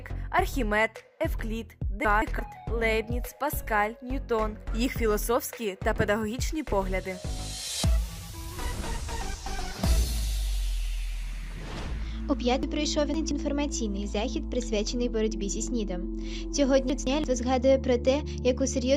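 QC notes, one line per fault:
2.05–2.39 s, 12.63–13.31 s and 16.90–17.24 s, chunks out of order: in each span one block of about 171 ms was delivered or written late. It played one block behind its place at 2.05 s and 16.90 s and three blocks behind at 12.63 s. Nothing is missing, but the sound comes in the wrong order, with three hard joins per event. This is heard as a brief jumbled, garbled moment.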